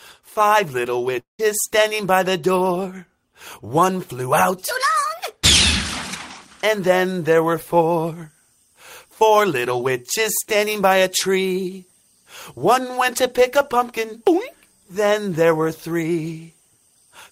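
At about 1.19 s the sound breaks off. The last fragment is stretched into a fading buzz for roughly 0.19 s, and then it goes quiet for about 0.14 s before returning near 1.41 s, with roughly 0.2 s of the original never heard. This is likely a long network dropout. A brief packet-loss glitch would be patched over seamlessly, and a simple mute or edit would cut cleanly. Here the decaying fill, the silence and the skipped material appear together.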